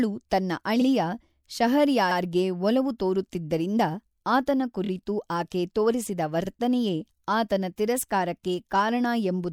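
Repeated frames stutter the speech at 0.81 to 0.85 s, 2.10 to 2.17 s, 4.84 to 4.89 s and 6.45 to 6.49 s. Each time, a short run of compressed frames was delivered again, so the decoder replays the same slice: 48 ms, 72 ms, 24 ms played two extra times, then 48 ms. These block lengths fit frames of about 24 ms. Each repeat is a brief hiccup, and the clip grows longer by the replayed time.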